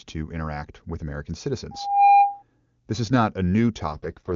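Loudspeaker feedback squeal runs from 1.71 to 2.43 s. The microphone is picking up the loudspeaker it drives, and at 807 Hz the loop gain climbs past one. That tone reinforces itself on each pass, swelling over roughly a third of a second into a steady squeal that ends up around 10 dB louder than the speech. It holds until 2.43 s.

An AMR rate drop follows from 3.92 to 4.34 s. Before it, the AMR wideband (HD Voice) codec carries the speech cleanly, which fits its top 23.85 kbit/s mode. At 3.92 s the speech turns rough, buzzy and more synthetic, with no gap and no loss of bandwidth. That points to the network pushing the codec down to about 6.6 kbit/s and spending the freed bits on error protection over a weakening radio link.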